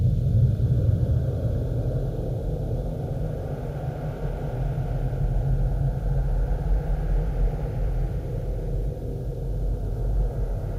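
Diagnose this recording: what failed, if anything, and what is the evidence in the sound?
Nothing in the signal chain failed; the recording of sounds carries no audible defect at any stage from capture through playback.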